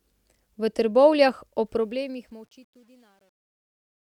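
From 1.66 s, the speech fade-out develops truncation distortion on a fade. With no dither, the quieter level lands on coarse steps, consistent with 10-bit resolution. From 2.34 s to 4.15 s the tail turns gritty. Gate chatter would open and close abruptly instead.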